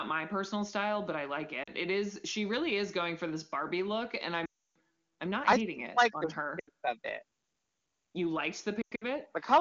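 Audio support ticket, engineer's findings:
Lost AMR speech frames, four events. 1.63–1.70 s: brief dip or warble. 4.45–4.74 s: about 0.3 s lost, sound drops quickly to near silence and returns weak. 6.59–6.69 s: short drop to near silence. 8.81–9.05 s: scattered dropouts over 0.2 s, longest about 0.1 s, rough recovery. Probable component: radio link. Failed checksums force the decoder to repeat the last good pitch and vocal tract settings with falling gain. Clean wideband between events points to AMR-WB at a high rate.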